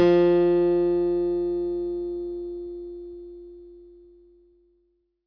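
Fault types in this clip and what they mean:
Nothing stood out on listening to these sounds.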